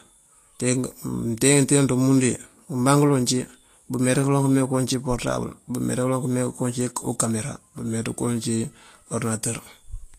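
From start to finish the speech carries Vorbis compression damage, likely from low-quality encoding that fits about 35 kbps. A spectrogram shows nothing above 14.2 kHz and speckled, noisy treble. Sibilants sound hissy and grainy, and consonant attacks are blurred.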